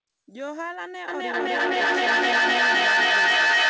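From 1.08 s, feedback echo between two devices: repeats every third of a second build to about 14 dB over the speech, not dying away.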